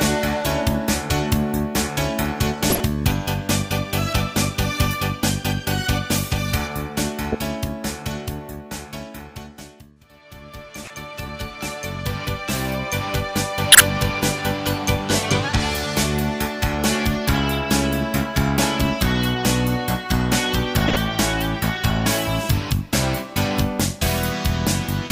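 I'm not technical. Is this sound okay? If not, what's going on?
No. Brief chirps or noise bursts at 2.70, 7.32, 10.83, 13.72 and 20.88 s are a corrupt frame decoded: damaged compressed data that the player played anyway.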